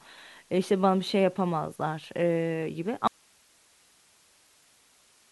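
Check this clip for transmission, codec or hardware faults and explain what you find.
There is one fault: an audio dropout to a faint residue. At 3.07 s the speech cuts out abruptly and does not return before the end. Only hiss remains, roughly 35 dB below the speech level. The cause is likely a break in the signal feeding the path while the later stages stayed live, so their noise floor carries on. The cut is sudden, unlike a natural pause or a fade.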